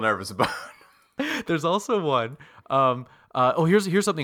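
Nothing here stands out as a technical fault; the speech just runs its course without any glitch, dropout or other problem worth flagging.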